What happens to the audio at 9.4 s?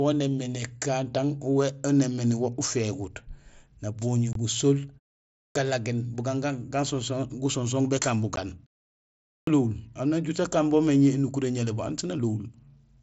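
At 9.4 s you're inside a clipped start after a pause: from 9.16 to 9.47 s, about 0.31 s of sound is swallowed because the output device dozed off during the roughly 0.6 s gap and hadn't woken up yet. The speech then kicks in abruptly, missing its opening.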